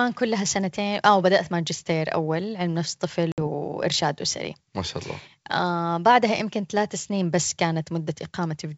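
Packet loss on an ADPCM call cuts a hard-edged silent hole into this speech recording from 3.32 to 3.48 s. About 60 ms of audio, roughly three packets' worth, went missing and was filled with silence. While nothing arrived, the decoder's adaptive predictor and step size drifted away from the sender's, so the speech re-enters slightly distorted. It then settles within tens of milliseconds. The surrounding speech carries the clear band up to about 7 kHz typical of G.722 wideband telephone coding at its full rate.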